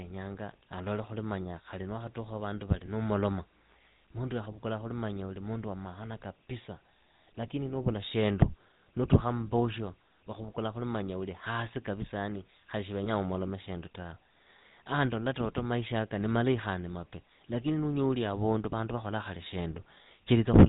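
The whole clip has that buzzy, gravelly GSM full-rate codec sound: nothing above 4 kHz and a coarse pulse-driven excitation, consistent with 13 kbps full-rate GSM. At 2.86–2.90 s, right after "wakhatukha wa vandu vali", and again at 13.04–13.09 s, between "hasi kapisa yani khali" and "umolome shindu tawe", you get lost GSM frames. The decoder repeats the last good frame, so the sound briefly freezes into a short metallic ring, about 20 ms each time.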